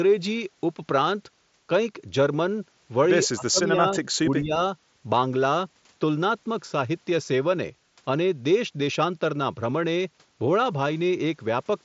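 Speech heard through a Bluetooth mSBC headset path, which stops near 7.7 kHz, dips sharply from 3.33 to 4.01 s and again from 4.19 to 4.59 s, by roughly 25 and 20 dB. This is likely speech suppressed in double talk: the level is pulled down, not cut cleanly as in a dropout.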